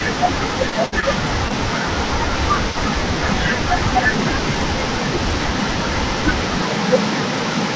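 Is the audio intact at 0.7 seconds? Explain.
No. At 0.70 to 0.74 s there is a short concealed packet loss. The sound briefly smears or wobbles instead of carrying on cleanly. About 20 ms of the call arrived too late for the decoder, so the receiver filled that 20 ms gap by extending the last sound, repeating its pitch if voiced or using shaped noise if not, and then blended back into the real signal.

The same moment falls inside speech suppressed in double talk, which runs from 0.03 to 3.32 s. The speech dips, thins at the top or drops out in pieces across most of that span, by around 15 dB at its deepest. The likely cause is that both sides were talking at once. The echo canceller could not separate this talker from the loudspeaker echo, so it turned both down.

There is also an echo leak throughout the clip. A delayed copy of the speech trails about 0.37 s behind the original, roughly 20 dB below it. 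The likely cause is a loudspeaker whose echo canceller let part of the microphone pickup through and sent it back into the call.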